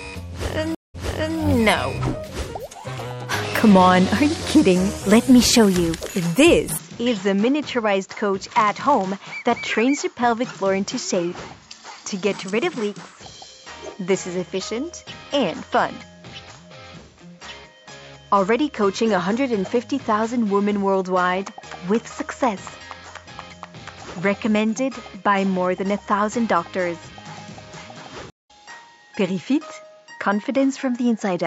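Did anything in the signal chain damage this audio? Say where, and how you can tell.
Yes. Several stages left marks.

MP3 compression, at the codec stage, runs through the whole clip. The damage is plainly audible: a watery, swirling texture and smeared attacks, which points to a bitrate around 64 kbps. At that rate the encoder likely ran short of bits, so it dropped weak frequency lines that then flicker on and off from frame to frame and left transients blurred.

A stream reconnect, at the network stage, occurs twice. From 0.75 to 1.38 s there is about 0.19 s of silence, and the audio then resumes 0.44 s earlier, repeating material as a resent burst would. At 28.30 to 28.51 s another gap of about 0.19 s follows, and playback picks up roughly 0.2 s later, skipping ahead. Each gap is the player dropping the connection and starting a fresh decoder mid-stream.

A drift correction step, at the driver or buffer stage, appears at 3.05 to 3.72 s and again at 12.33 to 13.17 s. 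In both spans speed rises by 6.02% and pitch by 101 cents, about a semitone, then snaps back. Speed and pitch moving together like this are likely clock-matching software resampling in one step to rebalance its buffer.

An input switched to a poorer device, at the analogue or device stage, begins at 6.78 s with no gap and lasts to the end. From there nothing above 7.6 kHz remains, the level drops by about 5 dB, and a new noise floor sits about 40 dB below the signal. The sudden dulling likely comes from the system changing to a narrower-band microphone or a headset call profile.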